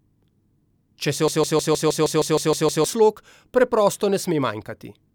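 A broken-record loop runs from 1.28 to 2.86 s: a fragment of speech about 156 ms long repeats exactly, back to back, ten times, giving a stuttering, machine-like rattle at roughly six repeats per second. The likely cause is a stall in the player, encoder or stream, which kept sending the last piece it held instead of new audio. Whatever should have been heard during those 1.6 seconds is gone.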